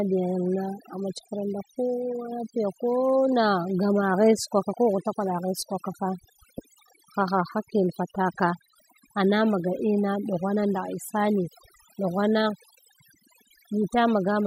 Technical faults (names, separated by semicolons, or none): overdone noise removal